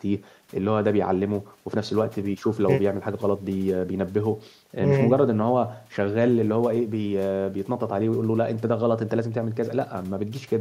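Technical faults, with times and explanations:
No technical faults, with times and explanations, can be given, as the speech has none.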